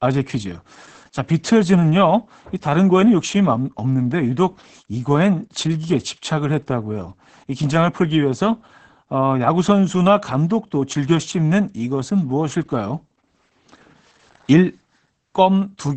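Speech carrying heavy Opus voice compression throughout: nothing above 8.9 kHz, a muffled, hoarse, slightly robotic quality from coarse SILK excitation, which fits roughly 10 kbps.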